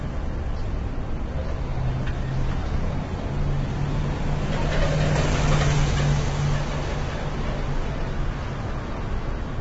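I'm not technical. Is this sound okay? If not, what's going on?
No. From start to finish, the sound has most likely been through low-delay AAC compression, the kind of squeezing used to keep video calls quick. It works in very short slices, so it captures fine detail poorly, and here it was squeezed hard. The result is rough and grainy, with a hiss filling gaps that should be clean, and nothing at all above about 7.7 kHz, so the brightest, crispest part of the sound is missing.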